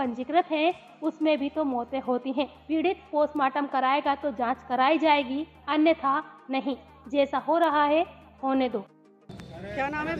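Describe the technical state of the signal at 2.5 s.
At 2.5 s the signal is intact, with no audible technical fault at that point.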